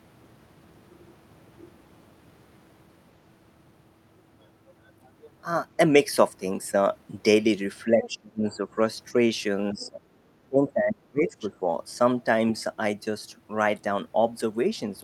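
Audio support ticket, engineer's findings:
Speech suppressed in double talk: talker ducks and dulls at 7.95–8.77 s (deepest, around 30 dB down), 9.73–10.02 s (about 20 dB) and 10.48–11.62 s (about 25 dB). Likely echo canceller unable to separate the talker from overlapping far-end echo and attenuating the whole mic path. Not packet loss or a noise gate: the dips coincide with the other side talking rather than with silence.

Other side's voice leaking through: brief second-voice fragments at 8.02–8.09 s (about 15 dB under the talker), 8.52–8.56 s (faint, about 35 dB down), 9.8–9.88 s (about 25 dB down) and 11.28–11.49 s (about 20 dB down). Likely residual loudspeaker echo left after cancellation. Not acoustic bleed or line crosstalk: every fragment falls inside a double-talk suppression window.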